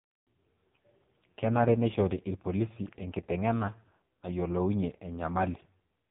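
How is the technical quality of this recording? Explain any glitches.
Quality is poor: the whole recording passes through an AMR narrowband mobile codec, running heavily compressed from start to finish. Across the speech, everything above 3.7 kHz is missing, and the vocal-tract model, fed very few bits, consistent with roughly 5 kbps, leaves voices buzzy, thin and synthetic. A spectrogram shows a hard ceiling near 3.7 kHz with blurred harmonics beneath.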